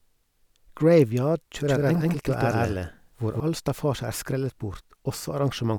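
From 1.68 s to 3.40 s, the likely cause is a second capture of the same signal arriving through a slower path and being mixed back in, producing a doubled audio track. A full-band copy of the speech trails the original by roughly 150 ms at about the same level, so every syllable is followed by a dry, uncoloured repeat that sounds like a slapback echo with no decay. The copy switches on and off abruptly at the edges of that stretch.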